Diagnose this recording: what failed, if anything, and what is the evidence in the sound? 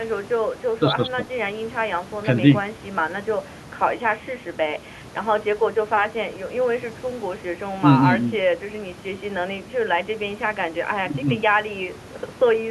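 Nothing failed in this recording.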